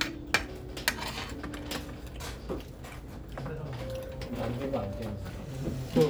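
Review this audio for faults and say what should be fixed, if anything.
Nothing in this recording of sounds needs fixing. No fault can be heard anywhere in it.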